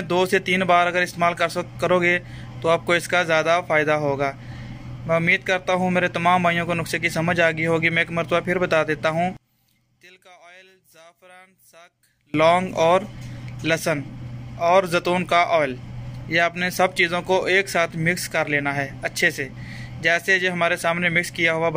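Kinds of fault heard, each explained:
One channel inverted: The likely cause is a polarity reversal on one side of the stereo pair, so when the two channels are summed to mono, everything they have in common subtracts instead of adding. In this clip the level falls by about 30 dB from 9.37 s to 12.34 s. For those three seconds the sound shrinks to a faint residue, then returns at full strength once the channels add normally again.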